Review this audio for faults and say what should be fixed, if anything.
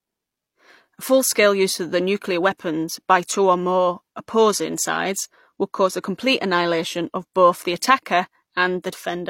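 The whole clip carries stacked coding artefacts with nothing above 16.3 kHz, and it sounds like transcoding between lossy codecs, likely an MP3 around 96 kbit/s re-encoded to HE-AAC near 32 kbit/s. The second encoder spends its bits on the first one's smearing and adds its own, so both layers of damage come through together. To fix it, encode once from the original uncompressed source straight to the final format.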